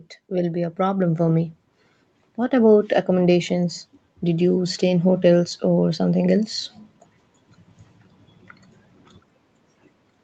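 From 0.29 s to 1.58 s you can hear automatic gain rising: the gain control decided the speech was coming in too quiet and nudged its gain up by about 6 dB over that stretch. The speaker and the background room tone swell together, a slow lift over roughly a second and a quarter. The band-limited top end, with nothing above 8 kHz, is just the call path at work and fits an Opus stream around 24 kbps.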